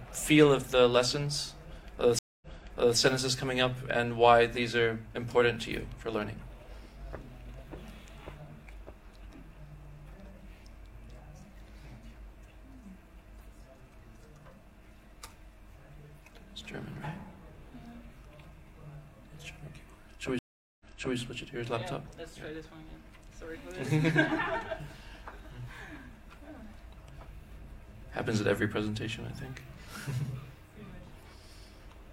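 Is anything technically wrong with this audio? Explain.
Yes. Stream reconnects occur at 2.19–2.97 s (230 ms of silence, then playback resumes about 0.56 s earlier) and 20.39–21.17 s (410 ms silence, resuming 0.37 s earlier). A fresh decoder restarts from resent data, so sound repeats. A plain dropout would not replay material.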